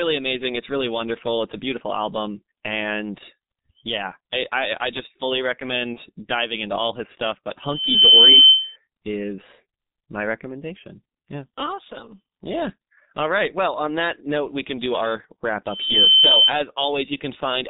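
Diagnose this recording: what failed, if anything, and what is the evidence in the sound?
The speech is muffled and hoarse from start to finish, with smeared consonants and nothing above 4 kHz. This is G.723.1 codec damage, and it is heavy. The coarse 30 ms frames and a low rate of about 6.3 kbit/s cannot track fast spectral changes.

From 5.93 to 6.00 s the speech briefly turns into a stretched sound that fades and then recovers weakly. This is VoIP packet loss concealed by the speech codec, a network-stage fault. The decoder extrapolated its last pitch and filter across what fits a single lost 30 ms frame.

From 15.65 to 16.54 s a pure tone at 3.1 kHz swells over about 0.4 s to roughly 10 dB above the speech. This is loudspeaker feedback squeal from an acoustic loop during recording. The microphone picked up its own loudspeaker, and the loop gain exceeded unity at that frequency.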